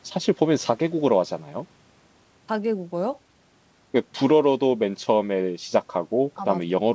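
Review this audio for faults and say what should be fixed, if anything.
No faults; nothing needs fixing.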